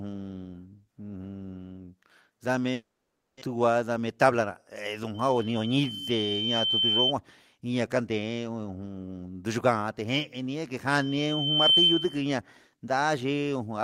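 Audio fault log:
2.73–3.49 s, long network dropout: the speech smears into a fading buzz, then drops to near-silence for about 550 ms before resuming. The likely cause is a gap in arriving packets; the receiver filled 680 ms but 600 ms of speech never came back.
4.00–4.50 s, jitter buffer speed-up: the speech sounds briefly hurried, running about 9% fast (109% speed) with its pitch unchanged. The receiver was shrinking an overfull buffer by trimming short pitch-period pieces, removing roughly 50 ms in all.
5.14–7.13 s and 10.87–12.29 s, loudspeaker feedback squeal: a piercing 3.1 kHz tone swells up, first over about 1.5 s to roughly 5 dB above the speech, then more quickly, in under a second, to roughly 10 dB above it. A microphone was picking up its own loudspeaker, and the loop gain exceeded one at that frequency.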